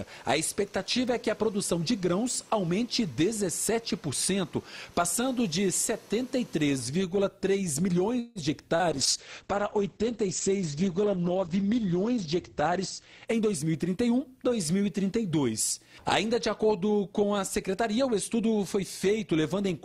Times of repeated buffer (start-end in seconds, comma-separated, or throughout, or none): none